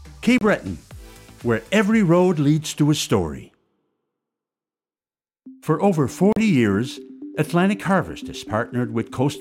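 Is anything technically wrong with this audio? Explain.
Yes, there are two short dropouts. At 0.38 s the sound cuts to silence for about 29 ms, and at 6.33 s it does it again for about 39 ms, picking back up each time. That pattern is likely a Bluetooth stall: radio interference held up packets, the headphones' buffer emptied, and playback paused until the resent data arrived. What you hear is a quick gap, then the sound carrying on.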